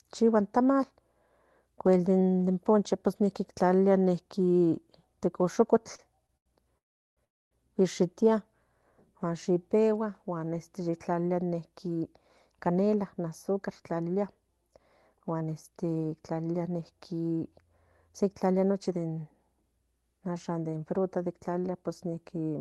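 Short stalls from a late packet hit at 5.95–6.02 s, 6.27–6.32 s and 6.37–6.49 s. Each time a packet was late, the jitter buffer emptied, and the receiver held the last sound for 32, 23 and 87 ms before resuming where it left off. They sound like brief, slightly buzzy smears. On a spectrogram they appear as short horizontal streaks of frozen harmonics.

Two call audio freezes follow at 6.78–7.20 s and 7.25–7.54 s. The likely cause is packets delayed in transit draining the buffer. The sound cuts into a fading buzz and then near-silence for about 380 and 260 ms. Playback resumes without loss. The waveform shows flat gaps, and the spectrogram shows blank columns.

Jitter buffer speed-ups run from 11.87 to 16.82 s at 110% speed, trimming roughly half a second, and from 18.09 to 19.63 s at 109%, trimming around 150 ms. Repeated removal of pitch-period slices makes the speech sound hurried at unchanged pitch. 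On a spectrogram, syllables look compressed in time while the harmonic spacing stays put. The Opus path's 12 kHz band limit shows as an empty region above that frequency throughout.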